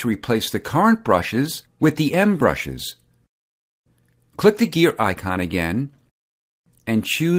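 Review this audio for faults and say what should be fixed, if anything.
Nothing stood out on listening, so there is nothing here that needs fixing.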